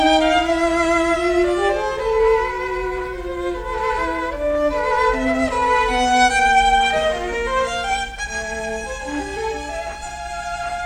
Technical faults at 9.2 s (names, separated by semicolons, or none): none